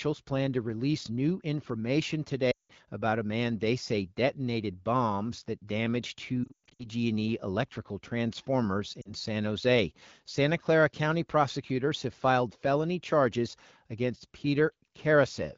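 At 2.51 to 2.71 s, lost AMR speech frames cut in. Radio errors corrupted the frames, so the decoder repeats the last good pitch and vocal tract settings at falling gain. The speech drops quickly to near silence. From 6.44 to 6.86 s the losses are scattered, with the longest gap 0.12 s. This gives a broken, warbling stretch. At 9.02 s a brief 40 ms loss causes a short dip. The clean wideband speech around these gaps fits AMR-WB at a mid rate.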